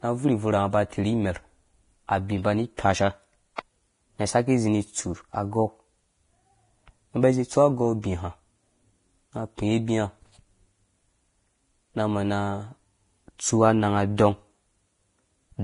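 From start to end, the speech carries heavy codec damage, likely from Vorbis compression. Nothing is heard above about 10.5 kHz. The treble that remains is coarse and grainy. Fine detail has turned into hiss of roughly the same energy. Voiced sounds take on a rough, gritty edge. Consonant onsets lose their sharpness. The strength of the damage fits a low bitrate near 30 kbps, where the codec has few bits to spend above its smooth spectral floor.

At 3.56 to 3.58 s there is a pre-echo. A sharp attack lands late in a transform block. The quantisation noise set for the loud attack spreads back across the whole block. So a brief hiss, about 22 ms long, sits just before the onset. The attack itself sounds softened and smeared rather than crisp.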